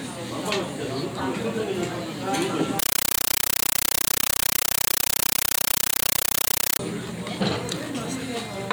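An everyday sound recording that, from 2.79 s to 6.79 s, is replaced by a compressed stream played as audio. An AC-3 bitstream is being taken for ordinary samples instead of being decoded, so each frame arrives as a harsh burst of noise about 9.3 ms long followed by silence, repeating 31.25 times a second. The burst length fits a 448 kbps stream. Unlike random hiss or a failing connection, the static is very loud, completely regular and chattering, and carries nothing of the original sound.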